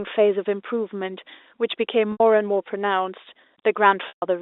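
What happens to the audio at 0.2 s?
Nothing goes wrong at 0.2 s: the speech carries on intact through the narrow telephone band of the G.711 line, with no break or added noise at that point.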